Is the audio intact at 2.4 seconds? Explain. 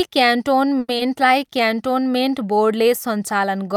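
Yes, at 2.4 s the speech is intact, with no dropout, click, distortion or other fault to be heard at that moment.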